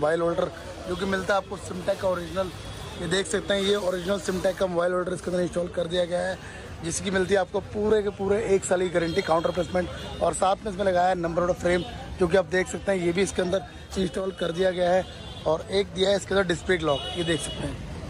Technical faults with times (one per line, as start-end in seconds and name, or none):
none